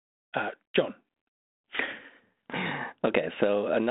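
Nothing stood out on listening to this speech clip.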